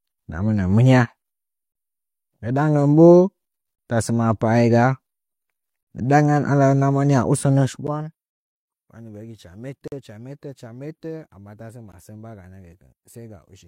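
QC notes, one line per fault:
7.87, 9.88–9.92 and 11.92 s (after "amma tasə"): gap between stream segments. Silent holes with hard edges of about 11, 45 and 17 ms recur every 2 s where segment timestamps fail to meet.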